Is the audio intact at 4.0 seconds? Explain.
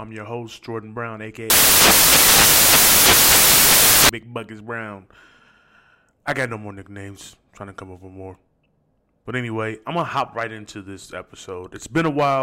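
No. At 4.0 seconds the speech is still inside a stretch of samples built from the wrong bytes, running from 1.5 to about 4.09 seconds. The reader is assembling each sample's bytes incorrectly, as if misaligned or swapped. The rapidly changing low-order bits end up as the dominant part of every value. The result is loud, harsh broadband noise, close to white on loud sounds.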